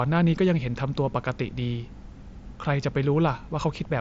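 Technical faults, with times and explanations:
No technical faults in the speech; the mSBC Bluetooth headset path carries it with its expected band limit, nothing above 7.7 kHz.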